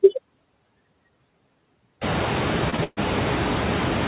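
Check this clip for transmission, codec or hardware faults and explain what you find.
Three faults stand out in this speech: light noise suppressor artifacts throughout, a short stall from a late packet near 2.7 s, and a longer call audio freeze just after it. The band stops at 4 kHz, which fits a narrowband telephone codec such as G.711.

Noise suppressor artifacts run through the whole clip. A suppressor estimates steady background noise and pulls those bands down frame by frame, here by only about 1 dB. The background noise still dips slightly between phrases. On a spectrogram the noise floor looks faintly patchy from frame to frame rather than smooth.

The short stall from a late packet runs from 2.70 to 2.74 s. A packet missed its slot, the jitter buffer ran dry, and the receiver stretched the last sound for 24 ms until the packet arrived. Nothing is lost, but one sound is held slightly too long. 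The waveform shows a brief repeated, flattened stretch.

The call audio freeze runs from 2.84 to 2.99 s. It was likely caused by packets being held up in transit. The receiver filled about 131 ms by extending the last sound into a fading buzz or hiss, which ends in roughly 10 ms of silence before the audio resumes where it stopped. On a spectrogram this appears as smeared horizontal bands that decay into a thin blank strip. The room noise rises around 2 s by about 22 dB, and stays about 13 dB under the speech.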